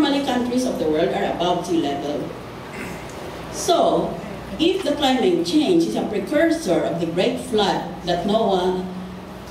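Nothing here stands out as a technical fault; the sound runs along without any glitch, dropout or disturbance worth pointing to.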